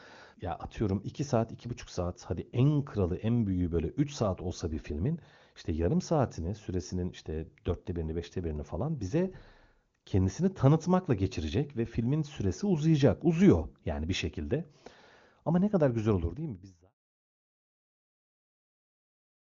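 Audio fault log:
No faults heard.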